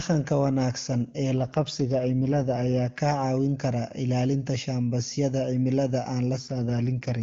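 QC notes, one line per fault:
1.33–3.00 s and 6.37–7.19 s, AMR rate drop: Right after "wanaagsan ee" and again after "kara ilaalinta shambasyada cimilada", the speech turns rough and synthetic. The band stays as wide as before and nothing drops out. The codec has stepped down to a leaner mode, likely because the radio link weakened and bits went to error protection. The change fits a fall from AMR-WB at 23.85 kbit/s, which is clear around these spans, to 8.85 kbit/s. Clarity returns once the rate recovers.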